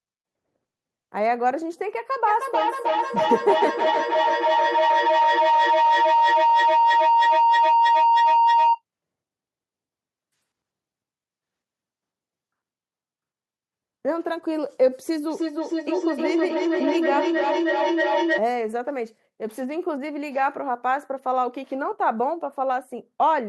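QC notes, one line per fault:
2.27–8.82 s, feedback howl. A tone near 1 kHz swells up out of the speech and peaks at about 4 dB above it. The loop delay is about 300 ms. Two devices in the same room are on one call. Sound leaves one loudspeaker, reaches the other microphone and comes back louder each pass. The loop favours one band, so the sound narrows to a single ringing pitch. It stops only when the loop breaks.
15.29–18.46 s, feedback echo between two devices. Each phrase comes back after roughly 300 ms, with every copy thinner and more metallic. The repeats reach about the level of the speech itself, so they pile up rather than fade. One device plays what the other's microphone sent, and that microphone hears it again. Each echo canceller removes only its own playback, so the other device's sound loops straight through.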